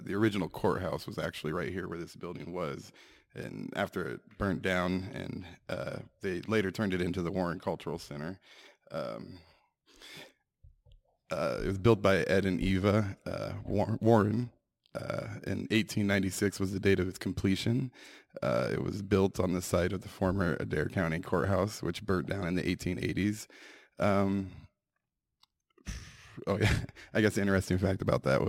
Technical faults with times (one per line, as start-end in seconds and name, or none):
0.00-28.48 crude rate conversion